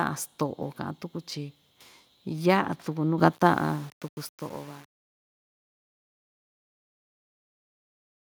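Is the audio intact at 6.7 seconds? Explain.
No. At 6.7 s the speech sits inside truncation distortion on the fade-out, running from 3.33 s to 8.32 s. The fade stage keeps about 8 bits without dither. The quiet tail turns gritty.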